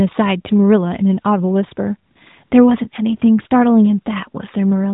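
In a speech clip carried over the AMR narrowband mobile codec, which caps the audio at 4 kHz, the phone twice judged the talker silent and stopped sending speech frames, producing AMR comfort noise. The receiver filled each gap with synthetic noise built from a rough estimate of level and spectrum. The real background drops out and a smooth, steady hiss switches in briefly, for 40 ms at 2.12 to 2.16 s and 80 ms at 2.44 to 2.52 s.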